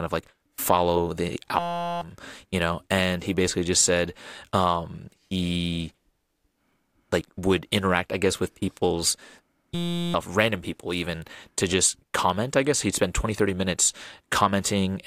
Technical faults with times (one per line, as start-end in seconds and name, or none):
1.59-2.01 system hang loop
9.75-10.14 system hang loop